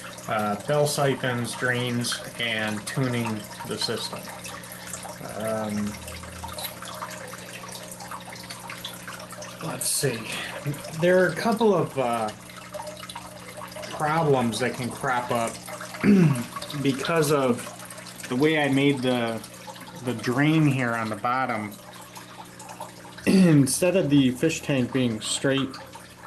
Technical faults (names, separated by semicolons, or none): none